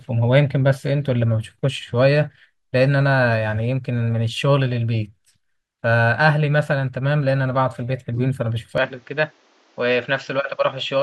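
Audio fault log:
8.78–11.02 s, input switched to a poorer device: the sound turns duller and a little quieter with no gap at the switch, likely because a different microphone took over. On a spectrogram everything above 7.6 kHz vanishes, and a new noise floor sits roughly 35 dB down. The waveform shrinks by about 5 dB.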